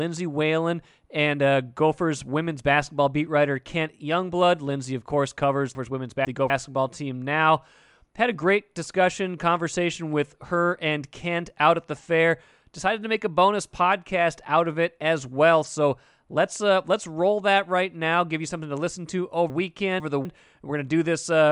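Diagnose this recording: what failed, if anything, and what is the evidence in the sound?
Chunks out of order, in the buffer or network stage: from 5.75 to 6.5 s and again from 19.5 to 20.25 s, a 250 ms block of speech plays two blocks late, jumbling the passage. The waveform and spectrogram show three abrupt vertical breaks at each spot.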